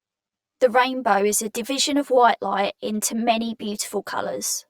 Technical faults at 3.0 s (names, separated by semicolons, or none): channel delay (comb filtering)